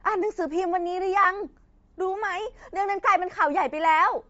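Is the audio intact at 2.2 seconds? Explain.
No, at 2.2 seconds the speech has a plainly audible breathy, grainy edge that runs through the whole clip. It's likely Bluetooth LC3 compression, at a rate that fits about 32 kbps with 10 ms frames, where the upper spectrum gets zeroed and filled with noise.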